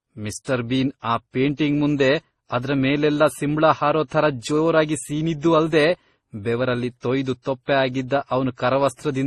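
From start to finish the speech carries layered smearing and swirly codec artefacts, with nothing above 12 kHz. That points to likely transcoding between lossy codecs, roughly MP3 then Opus at around 32 kbit/s each.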